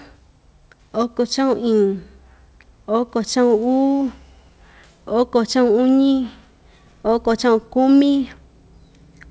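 No technical faults are audible.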